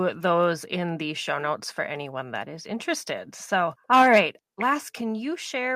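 Microphone overload runs from 3.92 to 4.19 s, just after "that is interested so". The speech peaks go about 6 dB past the converter's limit and their tops are flattened across roughly 5% of samples. This gives a harsh, crackly edge that points to input gain likely set too high.

Microphone volume stepped down occurs at 4.02 s, inside that distorted stretch, and again at 5.01 s. Voice and background drop together by about 2 dB and then about 5 dB, as the call software likely reacted to the loud input by lowering the device level.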